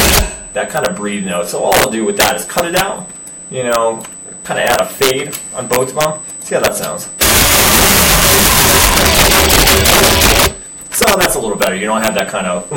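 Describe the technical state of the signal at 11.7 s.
USB whine is present at 11.7 s, as it is across the whole clip. Current drawn by the bus in 125-microsecond microframes leaks into the audio through power or ground, leaving a steady, fixed-pitch tone at 8 kHz, sitting roughly 15 dB below the signal.

Integer overflow also affects this moment and runs throughout. The signal is driven about 10 dB past the integer limit, and instead of being clamped, a few percent of samples wrap to the opposite sign. Each loud peak snaps across the full range, producing violent cracks far harsher than clipping.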